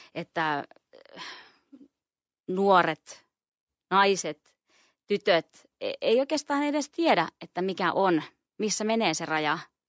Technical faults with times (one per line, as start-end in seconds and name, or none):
none